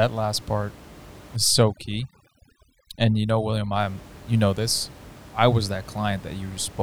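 From 1.37 to 3.79 s, overdone noise removal sets in. Aggressive suppression guts frequency bands near the noise floor, leaving twinkling specks against room noise about 21 dB down.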